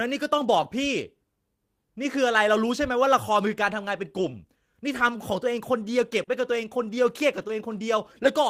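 At 4.17 to 4.31 s a lost packet is rebuilt from error correction: about 80 ms, which fits four 20 ms packets, is played from the low-bitrate copy carried in the following packets. There is no gap, but that stretch turns rougher and noisier. The waveform stays continuous, while the spectrogram shows blurred harmonics and a grainier noise floor. The same happens for 40 ms at 5.07 to 5.13 s.

At 6.23 to 6.29 s there is a short concealed packet loss. About 40 ms never arrived, so the decoder stretched the preceding sound forward and faded back into the real signal, which gives a brief smear or wobble. On a spectrogram the harmonics run on flat where the real ones should move. The last 20 ms of that stretch, from 6.27 s, comes from an error-correction copy instead.

A final 40 ms error-correction rebuild at 7.37 to 7.43 s brings the same brief roughness.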